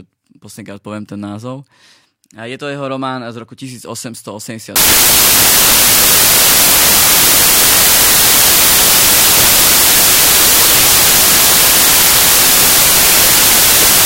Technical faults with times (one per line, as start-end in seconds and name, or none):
4.76-14.05 samples built from the wrong bytes